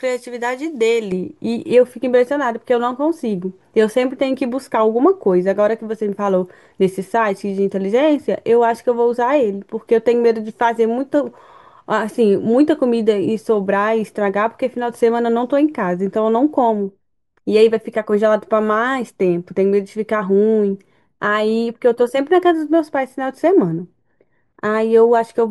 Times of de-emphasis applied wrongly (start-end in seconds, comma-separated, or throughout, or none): 1.12-25.50